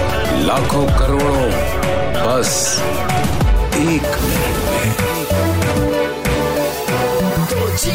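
No technical faults detected.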